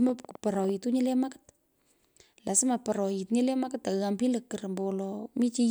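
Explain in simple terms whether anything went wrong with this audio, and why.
A train of clicks runs from 0.09 to 0.70 s: about seven matching ticks at an uneven pace, likely interference, unlike a single isolated pop.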